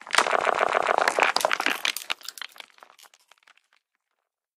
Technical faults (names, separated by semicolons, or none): repeated frames